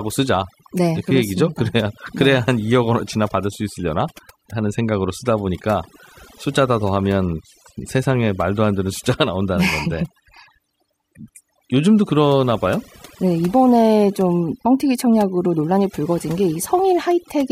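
It's a speech clip with overdone noise removal running from start to finish. The noise reduction was pushed too hard, so bands sitting near its noise estimate get switched off, leaving a lowered background full of twinkly specks.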